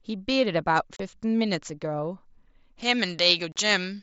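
A speech clip, carried over a wideband Bluetooth headset link with light mSBC graininess, has two abrupt holes, a 30 ms gap at 0.96 s and a 37.5 ms gap at 3.52 s. These are unconcealed Bluetooth headset packet loss: voice packets between headset and phone never arrived and silence or an idle pattern filled their place, nothing smoothing over the gaps. From 2.82 s to the end, the voice turns thin, bright and hissy on sibilants. That is pre-emphasis left on, a treble boost of about 11 dB at 10 kHz relative to 1 kHz whose matching de-emphasis cut was never applied.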